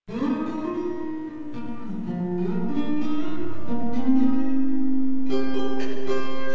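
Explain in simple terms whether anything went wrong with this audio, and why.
Clock drift between sender and receiver runs through the whole clip: the sending device's audio clock ran about 4 percent slower than the receiving one. The receiver's jitter buffer kept draining, because sound arrived more slowly than it was played out.

Repeated timing corrections, from 0.00 to 6.52 s, are the receiver's response. It kept repeating short pieces of audio to fill the gaps, all in the same direction and at uneven spacing. Together they add roughly a fifth of a second and slow the tempo to 96 percent.

The call codec itself, which carries nothing above 8 kHz, is not at fault.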